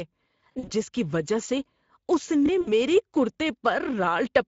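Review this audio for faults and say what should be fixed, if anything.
The sender encoded the whole clip with the Speex codec at a middle bitrate, which the sound suggests is around 17 kbps. Too few bits went to the excitation, so the speech sounds plainly noisy and hoarse throughout. Encoding at a higher Speex quality setting, or switching to a more modern codec, would prevent this.

Packets carrying the audio were lost, and the speech decoder filled the gaps by stretching its last pitch and filter while lowering the gain. This happened from 0.52 to 0.72 s, just before "جس کی وجہ سے", where about 100 ms went missing in short gaps of up to 40 ms. It happened again from 2.61 to 2.70 s, where about 60 ms was lost. Both spots turn into a fading buzzy tone or coloured noise, and the voice stays weak for a moment afterwards. A larger jitter buffer or forward error correction on the link would prevent this.

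A repeated buffer occurred when new audio reached the playback device too late, so the device played its last block again. At 2.46 to 2.49 s, right after "کی وجہ سے اس", a short piece of sound plays twice with a hard join. It is heard as a quick stutter or click, and it fits a 1024-sample buffer of about 23 ms, with around 20 ms of audio lost. A larger device buffer or a higher-priority audio thread would prevent this.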